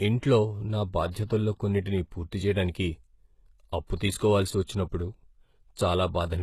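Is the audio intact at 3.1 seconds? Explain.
No. Throughout the clip, including 3.1 s, the speech has likely been through HE-AAC compression at a very low rate, consistent with about 16 kbps. Only the lower spectrum is coded and the treble is rebuilt by copying lower bands upward, so sibilants sound gritty and metallic, with nothing above 12.3 kHz.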